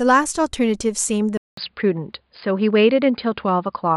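Speech, and at 1.37 s things change: after a gap of about 200 ms the sound comes back duller and boxier, with nothing above about 4.9 kHz, a level shift of a few dB, and a faint new noise floor sitting well below the speech. That stays to the end. It sounds like an input switched to a poorer device, likely the system jumping to another mic or a headset's narrowband call profile mid-recording.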